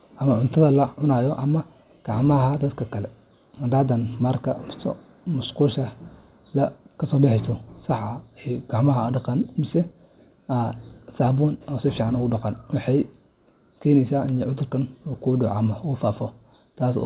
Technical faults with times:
none

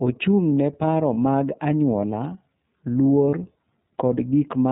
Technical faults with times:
0.00-4.71 iLBC codec
1.14-1.18 lost iLBC frames
3.29-3.34 lost iLBC frames

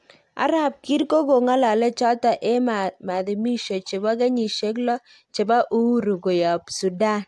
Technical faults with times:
none

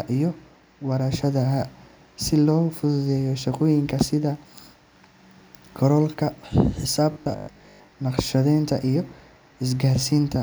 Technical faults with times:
7.12-7.96 robotic sound from repeated short buffers

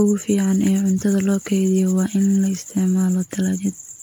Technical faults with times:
0.00-4.03 generation loss
0.52-2.71 sample clock jitter

